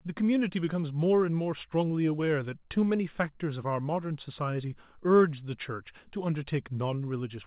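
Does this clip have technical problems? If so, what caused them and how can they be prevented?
No, there are no technical problems in this clip.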